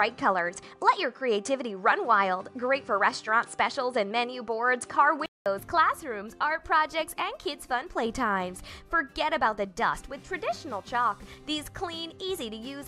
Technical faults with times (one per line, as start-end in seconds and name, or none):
0.00-5.46 input switched to a poorer device